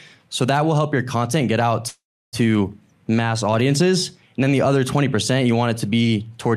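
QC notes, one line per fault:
1.87–2.35 s, call audio freeze: the last sound smears into a fading buzz, then 0.33 s of silence before the speech resumes where it stopped, pushed 0.45 s later, likely from a drained jitter buffer. Spectrogram: decaying band, then blank; waveform: tapering envelope, flat line.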